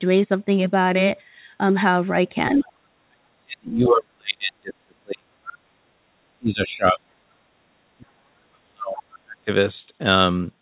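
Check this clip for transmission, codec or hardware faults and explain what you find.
Two echo-canceller faults show up, both tied to the far end being heard through the talker's loudspeaker. The whole thing stops at 4 kHz, which fits a narrowband G.711 call path.

Other side's voice leaking through: short scraps of a second voice at 2.55–2.72 s, 5.47–5.53 s, 6.61–6.65 s and 9.13–9.18 s. They're faint, roughly 20 to 30 dB under the talker. The likely cause is the loudspeaker playing the far end into the mic, with the canceller leaving a bit of that residual echo behind.

Speech suppressed in double talk: the talker's speech sinks hard at 3.08–5.95 s, 6.25–7.35 s and 7.97–9.49 s, dropping by something like 35 to 40 dB at its deepest. It lines up with the leak moments, so both sides were likely talking at once, and the canceller couldn't tell its own talker from the echo and turned everything down.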